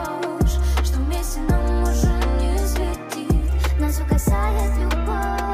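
From 3.48 s to the end, the audio shifts into a section at the wrong speed: it runs about 1.14 times faster than the material before it, and the pitch rises with it by roughly two semitones. The change is abrupt, so the last stretch sounds higher and more hurried than the opening. Because speed and pitch move together, the likely cause is playback or editing against a mismatched clock rather than deliberate pitch processing.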